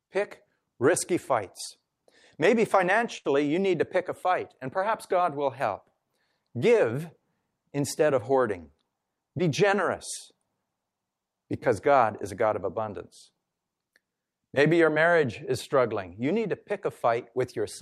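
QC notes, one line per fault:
3.17–3.27 s, short stall from a late packet: a packet came late, so the receiver stretched the last sound for 74 ms. Nothing is lost, just held.
8.94–9.82 s, jitter buffer speed-up: the receiver trimmed short pitch-period pieces to shed roughly 70 ms. Speech runs at about 108% speed, same pitch, hurried.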